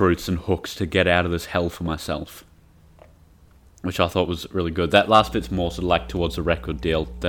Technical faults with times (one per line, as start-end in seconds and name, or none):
5.19-7.28 mains hum